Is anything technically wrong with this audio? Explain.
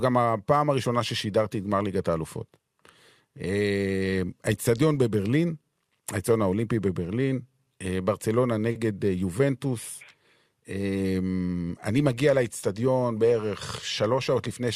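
Yes, there are two faults. From 8.71 to 8.77 s there is a short stall from a late packet: the jitter buffer ran dry and held the last sound for 40 ms, so that moment drags without losing anything. From 12.73 to 13.02 s there is a jitter buffer speed-up: the receiver trimmed pitch periods, dropping about 40 ms, so the speech rushes ahead at 112% without changing pitch.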